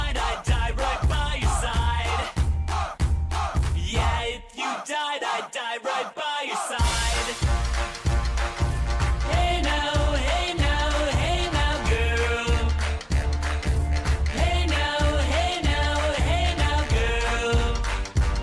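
No technical faults can be heard anywhere in the audio. Nothing in it calls for comment.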